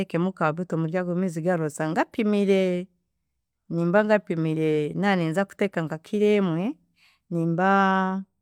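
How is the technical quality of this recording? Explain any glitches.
Nothing here to flag: there are no glitches or technical faults anywhere in this recording.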